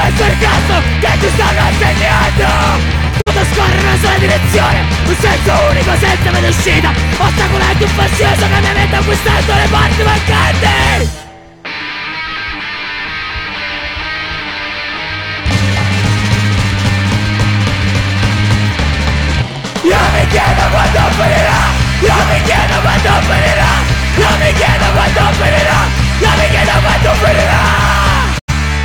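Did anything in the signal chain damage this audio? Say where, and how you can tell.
Yes. The sound quickly fades out over about 20 ms and goes silent twice, from 3.20 to 3.31 s and again from 28.38 to 28.52 s. Each time it returns later in the programme with the missing stretch simply gone. This is a digital broadcast dropout at the reception stage. The receiver muted when incoming frames were lost or failed their checks, then resumed on the next good frame. The gaps fit one lost frame of about 43 ms and then two frames totalling about 85 ms.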